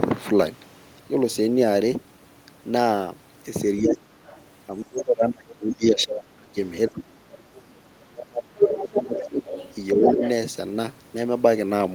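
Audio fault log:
3.81–4.11 s, 4.85–7.46 s, 7.81–9.42 s and 9.94–10.22 s: speech suppressed in double talk. The talker's level dips sharply in each stretch, by about 25 dB at worst in the first three and by about 10 dB in the last. The longest is roughly two seconds, from 4.85 s. The likely cause is an echo canceller that could not tell the talker apart from loudspeaker echo while both sides spoke, so it pulled everything down together.
4.25–4.41 s, 5.70 s, 7.56–7.61 s and 8.65–10.30 s: other side's voice leaking through. A second voice is heard under the talker, as short scraps at about 25 dB, 10 dB and 30 dB below the speech, and then as a sustained stretch of more than a second only about 5 dB down. That last one overlaps the suppression around 9 to 10 s. This is likely residual loudspeaker echo that the canceller failed to subtract from the microphone signal.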